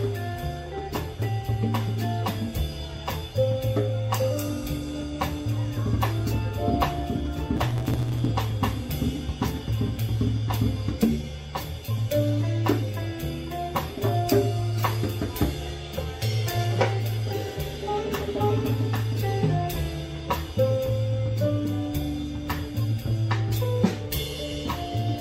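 From 7.56 to 8.30 s there is a block size mismatch (truncated): one stage writes longer blocks than the next reads, so each block's tail is dropped. The audio runs about 1.09 times fast at near-normal pitch, with a 109 Hz buzz showing as regular waveform jumps and evenly spaced vertical striations on a spectrogram.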